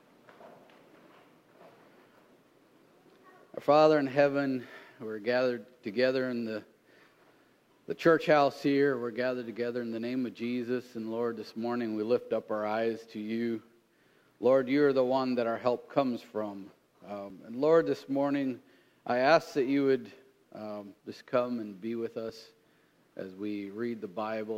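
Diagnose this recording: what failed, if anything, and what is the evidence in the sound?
You get tiny skips at 2.32, 7.32, 12.31, 17.30 and 22.29 s, about 5 s apart, each dropping just a few milliseconds with the two sides butted together. That regular spacing points to audio missing between chunks, likely at the buffer or recording stage while it rolls over to the next chunk.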